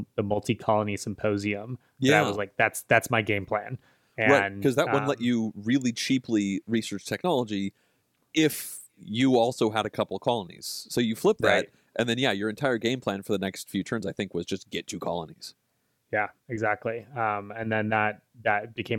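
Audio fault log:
5.82 s, electrical switching spike: a sharp snap, only a couple of milliseconds long and fairly modest at around -25 dBFS, sits on top of the speech without interrupting it. The likely cause is a nearby switch or static discharge arcing briefly and the line picking it up. Unlike a buffer dropout or digital glitch, nothing is missing or repeated beneath it; the underlying audio carries straight through, with the snap simply added.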